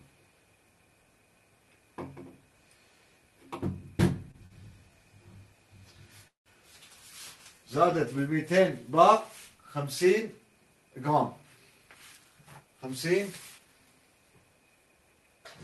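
Short stalls from late packets occur at 4.31 to 4.36 s and again at 4.46 to 4.52 s. Each time the next packet was not ready when due, the jitter buffer ran dry, and the receiver held the last sound in place, for 23 ms and then 44 ms, until data arrived. The audio then resumes exactly where it stopped, so nothing is lost, but the sound hangs briefly with a faint buzzy smear, twice in quick succession. A call audio freeze follows at 6.28 to 6.48 s. The sound is extended as a decaying buzz and then drops to silence for about 140 ms, 182 ms of filler in all, before continuing from the same point. This is likely packets held up in transit long enough to empty the buffer, so the clip gains a gap rather than losing content. Jitter buffer speed-up runs from 11.42 to 12.92 s. The buffer had built up more audio than its target, so the receiver trimmed many short pitch-period slices in a row, around 150 ms in total. 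Playback runs at 109% speed with the pitch unchanged, giving that stretch a slightly hurried feel. Throughout, the codec's coding noise is present and the highs stop near 12 kHz, which fits Opus at a modest bitrate such as 32 kbps.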